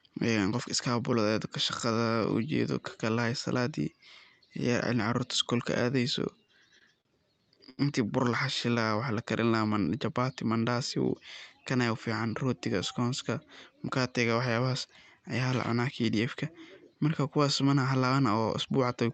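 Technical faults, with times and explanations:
6.47 to 7.08 s, repeated stalls (stutter): Packets reached the receiver late over and over, so its jitter buffer emptied five times in about 0.6 s. Each time the last sound was continued instead of going silent, filling 96 ms in all. That is about 16% of the span, and the longest gap is 40 ms. Nothing is lost, but the speech catches and drags. On a spectrogram, short smeared stretches of repeated harmonics interrupt the normal flow. On the waveform, the cycles repeat with a slight dip in level.
7.70 to 7.81 s, short stall from a late packet: A single packet missed its slot and the buffer ran dry. The receiver stretched the preceding sound for 77 ms and then resumed from the same point, with the playout delay now 77 ms longer. One sound is held too long, with a faint buzz. The spectrogram shows frozen, flat harmonic bands for that stretch. The waveform shows near-identical periods repeated, with a gentle level sag.
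10.10 to 10.32 s, jitter buffer speed-up: Audio had built up in the buffer beyond its target, so the receiver trimmed it down. It cut out single or few pitch periods, removing roughly 40 ms in total. Over this stretch the speech plays at about 114% speed without any pitch change, so it sounds briefly hurried. On the spectrogram, the syllables and formant transitions are compressed in time. On the waveform, the periods butt together at the splice points. Through this the call codec's band limit at 8 kHz stays visible as the usual upper edge of the spectrum.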